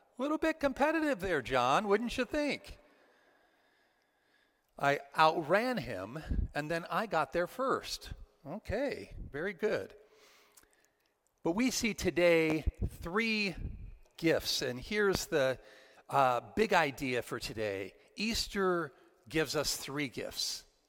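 At 12.50 to 12.70 s a loud pop arrives as a quick double thump, peaking somewhere around 10 dB above the surrounding sound. A single pop follows at 15.15 to 15.18 s, roughly 20 dB above it. Each is likely a voltage step or spike from a plug, switch, static discharge or driver glitch that was added onto the signal. Unlike a dropout click, nothing is removed: the sound continues uninterrupted beneath both pops.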